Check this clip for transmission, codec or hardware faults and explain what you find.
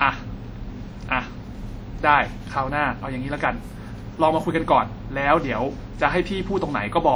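One codec fault runs through the whole speech recording. WMA compression is the likely cause: the sound rings and smears, with a hiss that swells and fades with the speech as quantisation noise spreads across long transform blocks. The damage is plainly audible, which fits a bitrate of about 48 kbps, though content still extends to about 20.1 kHz.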